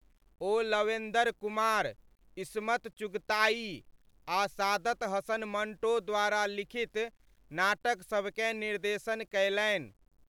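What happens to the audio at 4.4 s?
Low bit depth without dither is present at 4.4 s, as it is throughout the speech. The samples were likely rounded to about 10 bits with no dither, so the error tracks the signal, leaving a grainy distortion roughly 45 dB down that grows gritty in quieter passages.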